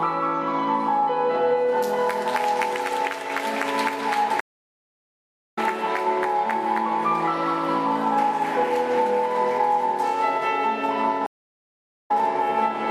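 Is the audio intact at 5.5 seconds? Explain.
No, 5.5 s falls in a stream reconnect: silence from 4.40 to 5.59 s while the player rejoins, then audio picks up roughly 0.7 s further on.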